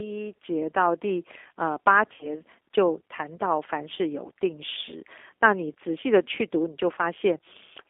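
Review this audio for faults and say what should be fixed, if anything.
Throughout, the speech sounds narrow, slightly rough and synthetic, confined to roughly 300 Hz to 3.5 kHz. This is G.729 codec damage: the decoder rebuilds each 10 ms frame from a vocal tract filter, pitch predictor and a few pulses, which fits an 8 kbit/s stream. Fix it by using a wideband codec such as G.722 or Opus when bandwidth allows.

From 2.14 to 2.29 s the speech smears into a fading buzzy tone or coloured noise and stays weak afterwards. This is VoIP packet loss concealed by the speech codec. About 60 ms of audio went missing, consistent with two lost packets. The decoder extended its last pitch and filter at falling gain, and took a while to recover. Prevent it by adding forward error correction or redundancy and a properly sized jitter buffer on the network path.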